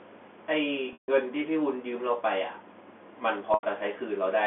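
Packet loss with pitch repetition hits at 0.93 s for 150 ms and at 3.54 s for 90 ms. Each time, a repeated pitch period buzzes, fades to silence, then the sound cross-fades back.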